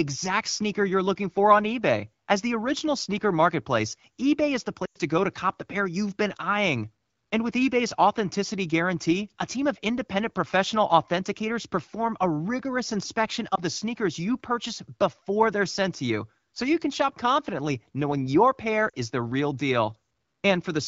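Speech over a wideband AMR link at 12.65 kbit/s shows lost AMR speech frames at 4.85–4.98 s after "is the", 13.55–13.61 s after "perform a rigorous inspection", and 18.90–18.94 s after "confidently knowing your pair". Each time the decoder stretches the last good frame with falling gain, giving a smeared dip. The first gap, about 100 ms, fits roughly five 20 ms frames concealed in a row.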